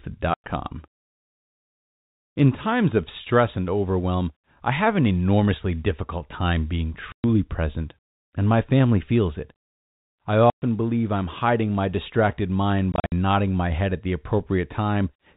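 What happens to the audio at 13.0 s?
Packet loss filled with silence hits between 12.92 and 13.12 s, after "hiding my distracted mind": lost packets were replaced by silence, punching about 140 ms of holes, the longest 60 ms, before "nodding my head at".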